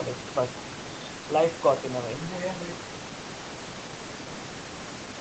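Nothing in this speech stood out as a technical fault on listening.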